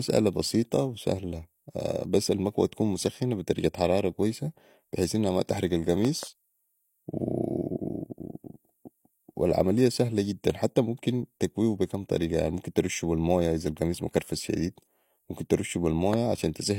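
Speech with a loud pop in two places: a pair of pops from 6.05 to 6.25 s, about 10 dB above the speech, and a single pop at 16.14 s, roughly 15 dB above. Speech carries on underneath, unlike a dropout, likely from a voltage spike from a plug, switch or static.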